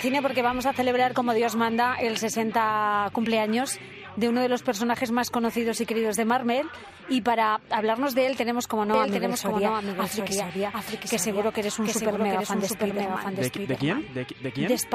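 At 8.94 s a doubled audio track starts abruptly, likely from a second capture path: a dry, quieter copy lags about 0.7 s, duplicating every spectrogram pattern.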